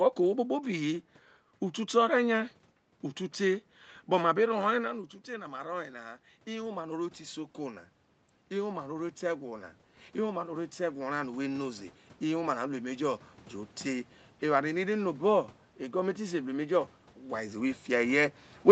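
Around 4.5 s the talker moves back and the level at the microphone drops by about 12 dB. From 5.26 to 7.87 s the automatic gain rising compensates, raising gain by about 4 dB, and from 8.5 to 13.27 s it climbs again by about 7 dB. Voice and room noise swell together over each span, so the background audibly rises under the speech as the gain control works to restore the lost level.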